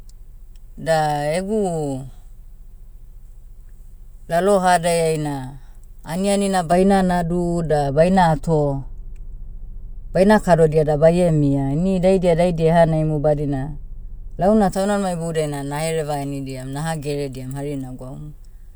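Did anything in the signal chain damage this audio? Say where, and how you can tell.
Yes. De-emphasis applied wrongly, 6.72 to 14.72 s, after "aniani na" until "taunimanima iboudiai na nahereva": the speech turns dull and muffled, treble sloping smoothly down about 11 dB at 10 kHz versus 1 kHz. A processing stage applied a pre-emphasis-undoing treble cut that wasn't needed.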